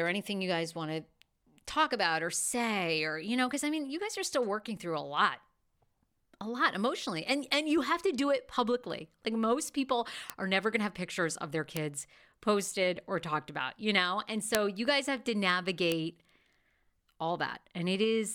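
Bit error spikes land at 10.30, 11.77, 14.55 and 15.92 s in this speech clip. Each is a single flipped bit that throws one sample, or two at 14.55 s, to a wildly wrong value before snapping back. The spikes reach about −10 dBFS, and about −4 dBFS for the two-sample one. Each is heard as a sharp, dry tick unrelated to the voice. On a waveform each shows as a lone needle. On a spectrogram it is a thin vertical line spanning all frequencies.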